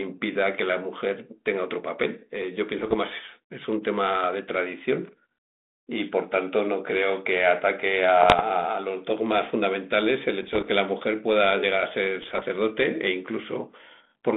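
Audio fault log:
2.79–2.97 s, 8.20–8.42 s, 10.42–10.68 s, 12.22–12.43 s: bit errors on an ADPCM link. Pops and rough bursts, each about 0.2 s, with brief level jumps on the 32 kbit/s G.726 line. Flipped bits, roughly 0.5 to 0.7 percent, derail the decoder's step size and predictor, so each hit rings on for milliseconds rather than dropping out cleanly.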